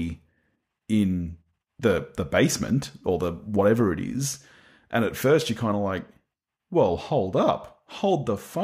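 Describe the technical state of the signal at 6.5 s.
At 6.5 s the speech signal is intact, with no audible dropout, distortion, clipping or other technical fault.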